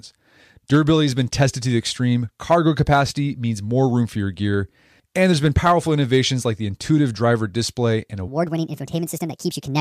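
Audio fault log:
8.28–9.81 s, section at the wrong speed: right after "intuitive driver display and", the speech jumps to 1.48 times its recorded speed and stays there to the end of the clip. Because speed and pitch are tied together, the voice rises by about seven semitones and sounds rushed and chipmunk-like. The sudden change at a clean boundary is likely caused by an editing or playback step that ran this final segment against the wrong clock rate.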